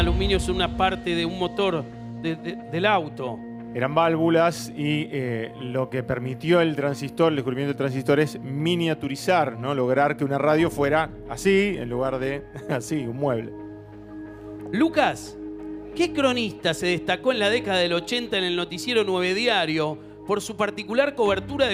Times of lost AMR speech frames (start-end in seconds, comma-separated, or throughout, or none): none